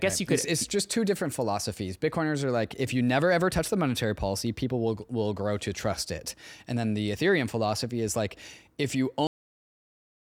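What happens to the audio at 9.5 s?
A cut-off end starts at 9.27 s, right after "is like if you": the final buffers were never written, so the sound stops mid-syllable into digital silence until 10.21 s.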